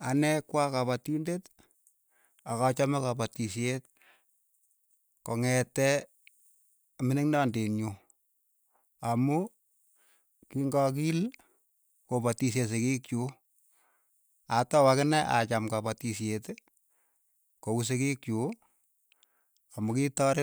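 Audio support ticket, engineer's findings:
Listened to the full speech clip and nothing stood out; no findings to log.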